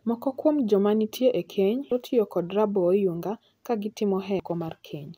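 A short glitch breaks into the speech at 1.88 to 1.92 s, between "joma nitie e keny" and "tiyo kod", and a second, similar blip lands at 4.37 to 4.40 s. Both are damaged data in a compressed stream: a stretch of the encoded file was corrupted, so the decoder misread those frames, lost its place, and had to hunt for the next valid frame header. Each disruption lasts only about 30 ms.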